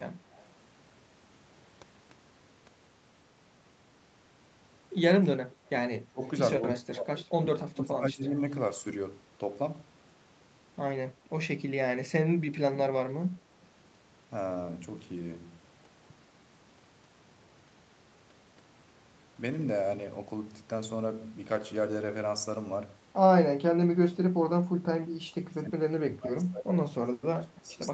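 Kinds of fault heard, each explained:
Echo leak: faint, delayed copies of the speech, trailing by 134 ms, slip through in short scraps around 0.3, 5.5, 7.2 and 27.7 s, loudest near 7.2 s. It's likely the far end's echo canceller missing part of what its microphone caught from the loudspeaker.
Speech suppressed in double talk: from about 6.1 to 8.4 s, and again from 23.6 s to the end, the speech dips in pieces, at worst by around 25 dB, likely because the echo canceller turned the talker down while both sides spoke at once.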